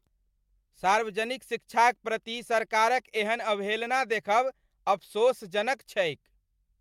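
Listening to this speech recording, nothing stood out as a technical fault at any point.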